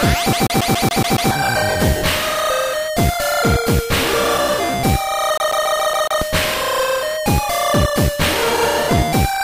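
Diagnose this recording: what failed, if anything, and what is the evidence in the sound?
Playback failed: a CD stuck on one turn. From 0.33 to 1.31 s, one 140 ms slice repeats seven times, each with a brief mute. From 5.38 to 6.22 s it repeats six times. A scratch keeps throwing the laser back one track, causing even stutter.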